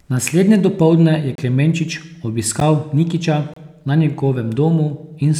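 Just after "dopoldne je", at 1.35–1.38 s, then at 2.6 s and 3.54–3.56 s, a block of digital silence appears: the speech cuts out with no fade, an abrupt break rather than a softened dropout. The 12 ms gap fits a 512-sample buffer left unfilled.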